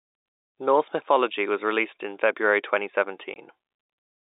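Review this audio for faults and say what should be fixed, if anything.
Packet loss filled with silence: hard-edged gaps at 0.40–0.50 s (100 ms) and 3.34–3.36 s (20 ms), matching 20 ms packets. Add jitter buffering and packet loss concealment to prevent it. The G.711 telephone band, roughly 300 Hz to 3.7 kHz, is heard throughout.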